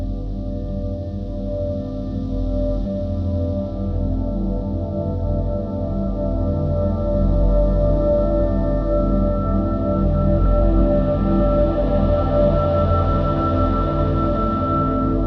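Mains hum runs through the whole clip: a steady low tone at 50 Hz, sitting only about 15 dB below the everyday sounds, so it is clearly audible beneath them and most exposed in quieter moments. Power-line current is leaking into the signal path, most plausibly through a ground loop between connected pieces of equipment or through magnetic pickup from a nearby transformer. The result is a constant drone underneath the recording.

A skip ahead occurs between 2.85 and 2.87 s. Roughly seven-tenths of a second of audio never plays. Later audio was already queued, and the stretch before it was discarded, either lost in transit or dropped by an overflowing jitter buffer. Playback jumps straight to the waiting material with no silence or fill, so the sound on either side is butted together. The playback delay shrinks by about the same amount.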